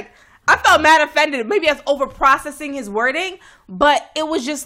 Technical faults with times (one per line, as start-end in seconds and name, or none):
none